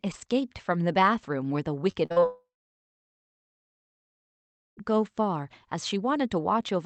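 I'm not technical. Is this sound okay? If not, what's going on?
No. From 1.91 to 2.24 s the speech turns choppy and robotic. This is repeated packet loss: small pieces went missing, and the gaps were patched over.

Then, from 2.26 to 4.79 s, the speech cuts out. A short fading buzz gives way to about 2.3 s of silence. The speech returns with that part gone. The likely cause is a long network dropout.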